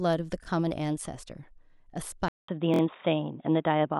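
At 0.44 s, a repeated buffer: fresh audio arrived late, so the device replayed a 23 ms piece once, which fits a 1024-sample buffer, giving a brief hard-edged stutter. At 2.28 s, the input likely switched to a poorer device: after a 200 ms gap the speech turns dull, with nothing above 3.8 kHz, a level shift of roughly 5 dB and faint new background noise. At 2.74 s, a second repeated buffer plays the same 23 ms piece three extra times, heard as a short stutter.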